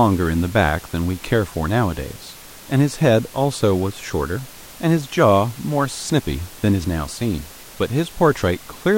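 No technical faults are present in this speech recording; the only background is the room's own noise, sitting about 22 dB below the speech.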